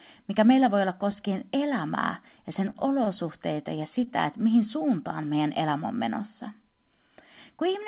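Three short stalls from late packets occur in this speech, at 2.70–2.76 s, 3.04–3.08 s and 4.04–4.08 s. Each time a packet missed its playout slot, the jitter buffer ran dry, and the receiver held the last sound until the packet arrived. About 43 ms, 18 ms and 22 ms were filled this way, with nothing lost. Each is heard as a brief drawn-out sound with a faint buzz or dip, against the call's narrow band with nothing above 4 kHz.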